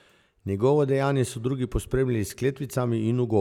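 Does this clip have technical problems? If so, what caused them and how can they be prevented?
No, the speech signal carries no audible technical faults, so there is nothing here that needs a cause traced or a preventive step.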